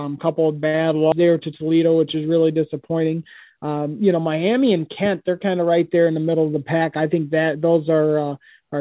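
At 1.12 to 1.14 s the speech performs a skip ahead: roughly 0.4 s of audio is simply gone, and playback jumps forward with no filler. With later audio already queued, a block was dropped, in transit or by the jitter buffer, and the delay was cut by about the same amount. It sounds like a missing chunk of speech. On the waveform the two sides butt together at a sharp seam, and the spectrogram shows formant tracks breaking discontinuously at that instant.

From 3.00 to 4.88 s comes a jitter buffer speed-up. Holding more audio than its target, the receiver repeatedly removed short pitch-period slices, about 0.2 s in total, so the speech runs at about 109% of normal speed while the pitch stays unchanged. It sounds hurried and clipped in rhythm. On a spectrogram the harmonics keep their spacing but syllables and pauses are compressed in time. The waveform shows tiny splice points between otherwise regular glottal cycles. 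The whole clip also lacks energy above 4 kHz, which fits the G.711 mu-law call codec, and this band limit is clearly visible as an empty upper spectrogram.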